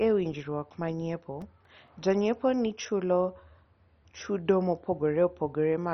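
Speech runs throughout with a dull, gurgling, granular quality and nothing above 6.1 kHz, the sound of heavy MP2 compression, likely at a low rate around 32 kbps. On a spectrogram the top edge is cut flat, with upper sub-bands flickering on and off as patchy blocks. Between 0.96 and 2.11 s come six CD scratch ticks, where the player bridges damage it can't correct on each disc turn. Each lasts only a few milliseconds. They show as thin vertical lines on the spectrogram and brief spikes or notches in the waveform.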